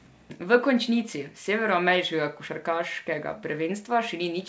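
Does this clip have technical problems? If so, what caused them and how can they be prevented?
No, there are no technical problems in this clip.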